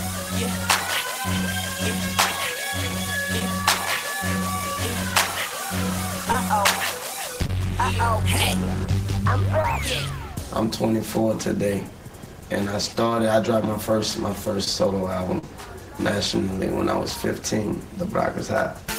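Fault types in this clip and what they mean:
short concealed packet loss: Six brief holes, near 3.39, 6.32, 7.47, 9.62, 14.65 and 15.39 s, where 10 to 40 ms of audio arrived too late and the receiver patched each gap by extending the preceding sound, either from its pitch or as shaped noise, then blending back into the real signal. Unlike a plain dropout, no silent gap opens. Each hole is heard as a short smear or wobble, longest at 15.39 s.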